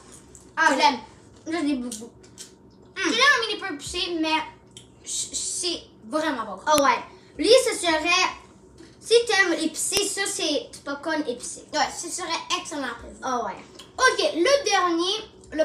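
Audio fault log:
6.78 s and 9.97 s: file header played as audio. Each point is a sharp, loud click where a new piece of the stream begins, as leftover WAV header bytes are read as sample values, producing an abrupt spike unrelated to the surrounding signal level.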